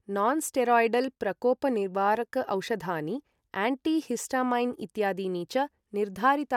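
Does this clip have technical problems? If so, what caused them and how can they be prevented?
No, there's nothing wrong to hear in this one, so there's no cause to track down and nothing that needs preventing.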